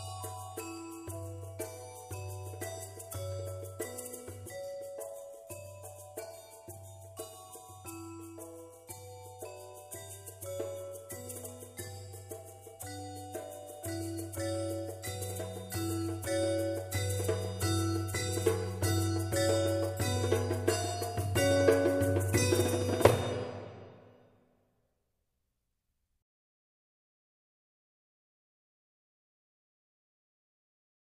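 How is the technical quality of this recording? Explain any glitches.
No glitches or technical faults can be heard anywhere in the recording, so there is nothing to explain.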